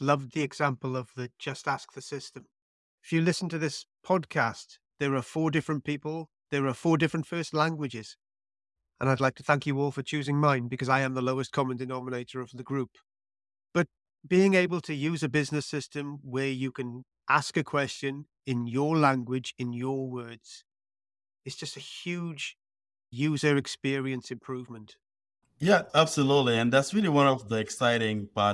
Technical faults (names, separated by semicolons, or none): none